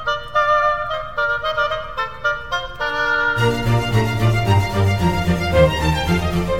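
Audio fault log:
No audible faults in this music.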